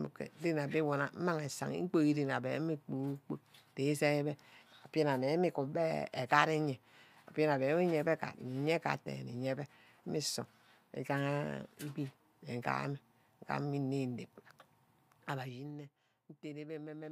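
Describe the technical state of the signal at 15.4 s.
At 15.4 s the signal shows zipper noise, running from 15.26 to 15.73 s. The level drops by about 15 dB in unsmoothed 1 dB steps at around thirty steps a second, and each step leaves a small click, heard as a fine ticking over the speech.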